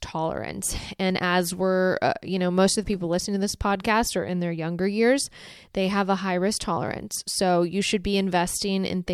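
No technical faults can be heard in the speech recording at any point.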